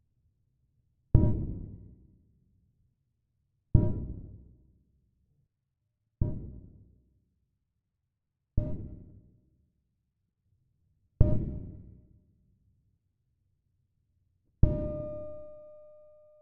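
No technical faults can be heard in the signal at any point in the clip.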